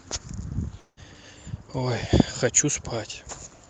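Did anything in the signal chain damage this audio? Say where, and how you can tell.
Yes. At the network stage, the sound stops at 0.79 s and is replaced by a buzzy continuation that fades away. The last stretch of that gap, about 80 ms, is close to silent, and normal audio resumes at 1.00 s. This is most likely a long network dropout: packets stopped arriving, the receiver's loss concealment extended the last sound for about 170 ms before fading out, and roughly 180 ms of the original audio was never played. The call codec limits the bandwidth to about 8 kHz.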